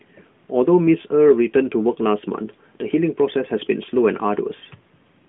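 Listening through this speech clip, nothing stood out as a technical fault at any point.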